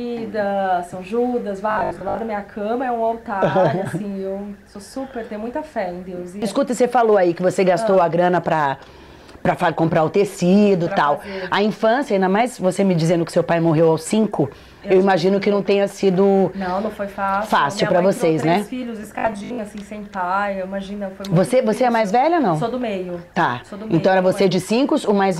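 From 1.71 to 2.19 s and again from 19.19 to 19.59 s, robotic sound from repeated short buffers imposes a rigid, metallic 50 Hz buzz. The likely cause is audio arriving too seldom, so 20 ms chunks replay in place of roughly half the material. Spectrograms show a stiff comb at 50 Hz multiples. Waveforms show identical repeating 20 ms blocks.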